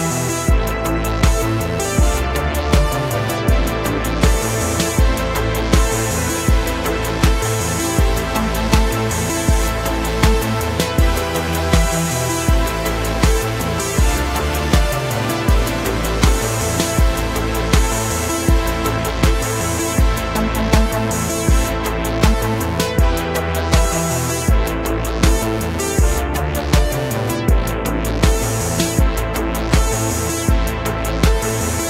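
No technical faults detected.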